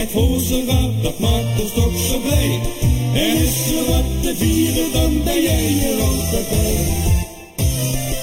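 From start to finish, one channel of the source runs late relative to the other by roughly a third of a millisecond, and the two were summed to mono. That is channel delay (comb filtering): anything common to both channels cancels at evenly spaced frequencies, the first near 1.5 kHz and the rest repeating at regular intervals above it. Because the notches stay fixed for the whole clip, the sound comes across as hollow and phasey throughout.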